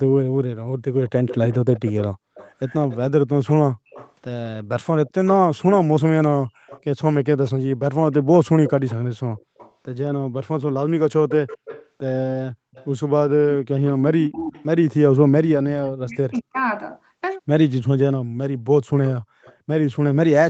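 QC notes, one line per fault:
1.06–9.72 s, 11.29–14.63 s, 16.33–16.41 s and 19.04–20.49 s, echo leak. A delayed second copy of the speech trails the talker by 220 ms. It sits about 15 dB under the speech in the first stretch, about 10 dB under from 11.29 s and at the end, and only faintly, around 35 dB down, at 16.33 s. The likely cause is a loudspeaker at the far end whose echo canceller let part of the pickup return.
15.54–16.57 s, speech suppressed in double talk. For about a second the talker's level drops sharply, by as much as about 40 dB at its deepest. This likely happened because both sides spoke at once. The echo canceller could not tell the local speech from the returning echo, so it turned everything down.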